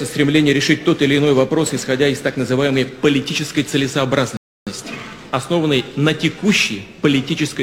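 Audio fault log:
4.37–4.67 s, rebuffering stall: the sound drops to dead silence for about 0.3 s, then picks up right where it left off. The player ran dry on downloaded audio and just waited for more, so nothing's missing, it's only stretched.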